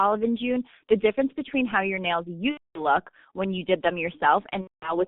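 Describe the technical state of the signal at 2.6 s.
At 2.6 s the audio sits inside a VoIP packet loss concealed by the speech codec, from 2.51 to 2.83 s, after "between how your nails" and before "when you did them". The decoder repeats its last pitch and filter over about 240 ms of missing audio, stretching the sound out as it fades, and muting it from the third lost frame. The whole clip also carries heavy G.723.1 codec damage. At 6.3 kbit/s, with a 150 Hz to 3.6 kHz band, the sound is muffled and hoarse, with blurred consonants.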